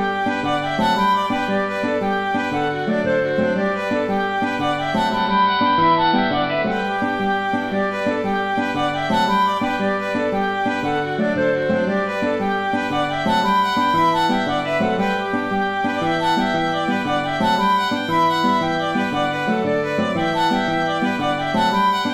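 From 4.94 to 6.96 s, digital radio blending to analogue: a 0.45 s cross-fade to AM adds hiss roughly 20 dB down, and shifts the level by about 1 dB.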